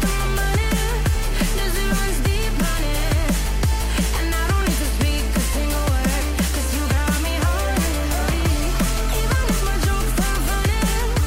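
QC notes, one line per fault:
1.91–1.93 s, 6.20 s, 8.29–8.31 s and 10.36–10.38 s: damaged data in a compressed stream. Each event is a brief blip lasting about 20 ms. At these points the encoded stream carries corrupted bytes. The decoder cannot read those frames properly, loses its place, and hunts for the next valid frame header. While it does, it briefly outputs garbled audio or nothing at all. That short burst is heard as a chirp, squawk, click or short hole.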